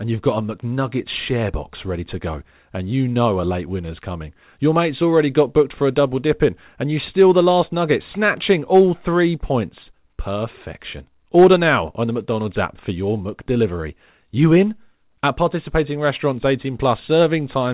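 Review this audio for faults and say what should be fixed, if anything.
Nothing needs fixing: the speech comes over a G.711 mu-law call path at 64 kbps with nothing above 4 kHz, as expected for that codec, and no faults are present.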